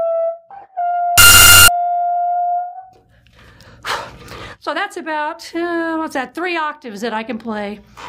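Samples built from the wrong bytes appear from 1.18 to 1.68 s, where the audio turns into loud, harsh broadband noise. The bytes of each sample were assembled wrongly, whether offset by one, swapped in order or misaligned, so the rapidly changing low bits dominate every value.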